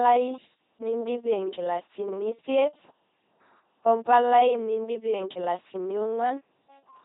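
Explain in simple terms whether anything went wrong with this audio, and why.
The speech was squeezed through an LPC-10 vocoder, which rebuilds a voice from a plain buzz or hiss, treating each moment as either voiced or unvoiced. Throughout, it sounds heavily robotic and buzzy, with stray buzz or hiss, and nothing above 3.8 kHz.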